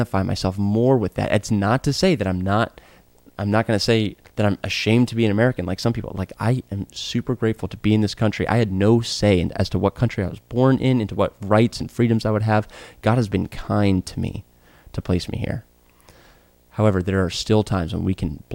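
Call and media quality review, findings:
Video or display buzz throughout speech. Buzz at 59.94 Hz field rate, hash above, 15.7 kHz line tone. Roughly 40 dB below signal. Screen or video cable coupling into audio path.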